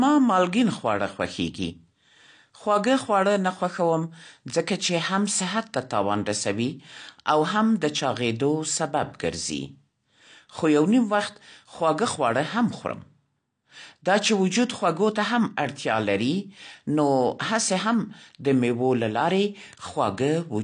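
From start to finish the speech sounds dull and smeared, with a fizzy, warbling edge on sibilants and held vowels. That points to AAC compression, likely AAC-LC at a low bitrate that fits roughly 32 kbps. The encoder starves the upper spectrum of bits, so nothing survives above 9.8 kHz. On a spectrogram that shows as a hard ceiling, with patchy gaps and speckled blocks beneath it where bands were dropped or filled with substitute noise.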